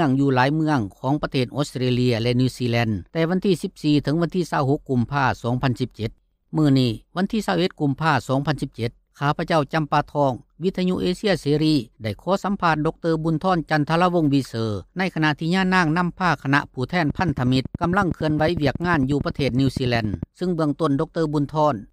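From 17.1 to 20.24 s, a train of clicks ticks regularly at 10.9 per second, roughly forty pulses, likely interference, showing evenly spaced vertical spectrogram lines.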